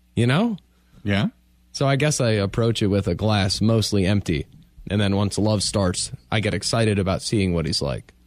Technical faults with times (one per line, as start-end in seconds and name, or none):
none